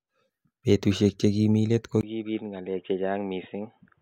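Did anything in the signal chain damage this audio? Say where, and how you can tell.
Yes. From 2.01 s to the end of the clip, the speech changes character abruptly. A gap of about 20 ms comes first. After it the level is roughly 10 dB lower, and nothing is left above 3.8 kHz. A new noise floor also appears, some 40 dB below the signal. The likely cause is that the input switched to a poorer device at the driver level, such as a headset call profile. On a spectrogram, the upper band ends in a hard shelf at the switch. The waveform shows a brief flat gap and then smaller envelopes.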